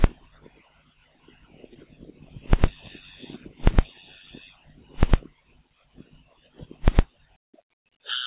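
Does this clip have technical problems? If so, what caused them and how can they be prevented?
Yes. Short concealed packet loss occurs at 1.74 to 1.77 s: about 20 ms of audio never arrived in time, so the receiver extended the preceding sound for roughly 12 ms and crossfaded back, leaving a brief smear. A larger jitter buffer or a more stable network connection would prevent it. The audio's cutoff at 4 kHz is expected from a narrowband call codec such as G.711 mu-law.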